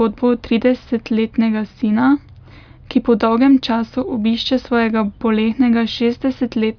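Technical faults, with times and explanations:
No technical faults.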